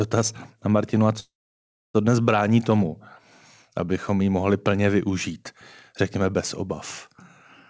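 From 1.20 to 1.96 s the speech stalls in a call audio freeze, likely from delayed packets draining the jitter buffer: a brief fading buzz, then about 640 ms of silence, before "dnes brání tomu" resumes exactly where it stopped. Unlike a dropout, nothing is lost; a gap is inserted. Throughout, the band stops at 8 kHz.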